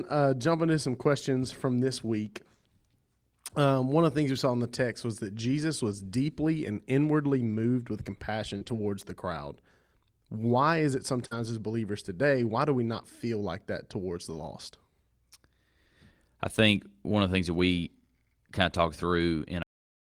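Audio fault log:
5.91–6.05 s, 7.25–7.59 s, 8.61–8.87 s, 11.31–11.41 s, 12.37–12.51 s, 17.71–17.73 s and 18.71–18.77 s, lost packet rebuilt from error correction: packets went missing, and the decoder played the low-bitrate copies carried in the following packets, so there is no gap. These stretches sound rougher and grainier. The longest runs 0.34 s, in which nine packets, 180 ms, were rebuilt. On a spectrogram each shows as a smeared, noisier block. The waveform stays continuous.
8.57–8.63 s and 11.27–11.33 s, short concealed packet loss: about 40 ms arrived too late each time. The receiver extended the preceding sound to bridge it, then crossfaded back into real audio. You hear a brief smear or wobble, and a short consonant there may vanish. A spectrogram shows harmonics or noise copied flat across the hole. Each concealed stretch runs straight into an error-corrected stretch just after.
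19.63 s, cut-off end: the final buffers were never played, so the speech stops mid-sound and falls straight to digital silence with no decay, possibly with a click. The waveform drops abruptly from speech to a flat line, and the spectrogram goes blank in a single vertical edge through to the end.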